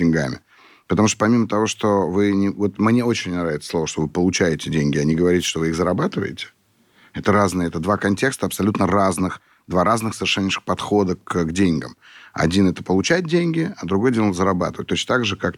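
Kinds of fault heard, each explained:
Wireless microphone noise hit: The microphone sends its signal over an analogue FM radio link. For an instant, reflected radio waves cancelled the direct signal and its strength collapsed. The receiver's own hiss then surged up over the audio. Here it lasts about 0.11 s, from 5.39 to 5.50 s. It falls between "получаете деньги а не" and "вы их зарабатываете". It is heard as a brief swish of static across the speech.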